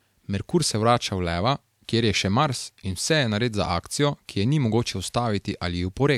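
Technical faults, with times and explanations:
Nothing technical stands out here; the speech comes across without any glitches worth flagging.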